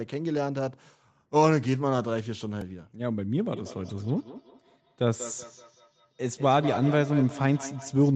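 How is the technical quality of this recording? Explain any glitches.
Two glitches stand out in this speech recording: a tiny stutter and then a feedback echo that continues to the end.

At 2.61 s there is a repeated buffer. New audio arrived late, so the playback device replayed its last block four extra times. Each block lasts about 1.33 ms, which fits a 64-sample buffer, so the five identical copies fuse into a brief buzzy click rather than an audible stutter. Nothing is lost from the speech. A plain click would be a single spike. This one has a short tonal buzz from the repeating period.

From 3.45 s to the end there is feedback echo between two devices. A second device in the room plays back what this microphone sent, and the microphone picks it up again. The echo canceller only removes its own playback, so the returned sound gets through. Speech comes back roughly every 200 ms, reaching about 13 dB below the direct voice, with each pass thinner and more ringing. 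Room reverberation would blur into a smooth tail. Here the repeats arrive at a regular spacing, and the sound is band-limited to 8 kHz like the rest of the call audio.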